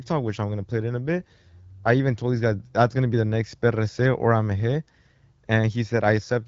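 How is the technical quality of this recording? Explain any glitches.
No glitches found; the speech passes through the AMR wideband (HD Voice) codec at 12.65 kbit/s, carrying only the light coding character expected at that rate.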